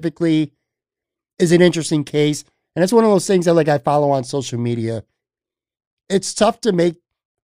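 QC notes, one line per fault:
No faults heard anywhere in this speech recording.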